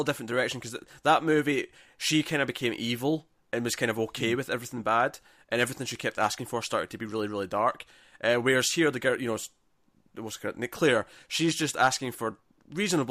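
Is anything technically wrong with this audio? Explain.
No, no technical faults.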